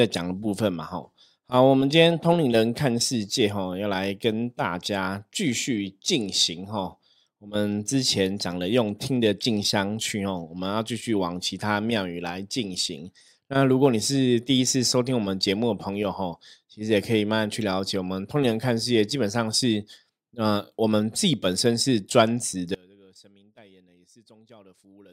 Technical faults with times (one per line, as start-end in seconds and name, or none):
22.75-25.13 audio dropout to a faint residue